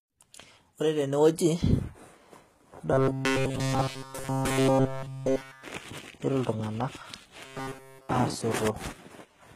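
Speech runs through the whole clip with plainly audible HE-AAC compression damage. The treble is present up to about 14.9 kHz but sounds gritty and lispy on s sounds. That points to spectral band replication rebuilding the highs from lower bands, likely at a low bitrate near 20 kbps. Unlike a simple low-pass, the top octave isn't dull, just falsely textured. From 2.92 to 5.64 s and again from 7.45 to 8.09 s, the voice becomes a rigid metallic buzz at 133 Hz. This robotic sound from repeated short buffers is likely caused by a roughly 7.5 ms chunk looping while fresh audio is skipped, and it occupies all of both stretches. Unlike codec warble, it imposes a buzz at one fixed rate that follows the voice only roughly.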